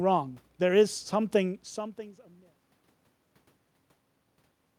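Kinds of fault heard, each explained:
Nothing here points to a fault, just a speech recording that eases out gently with some ordinary room noise and the talker shifting on mic.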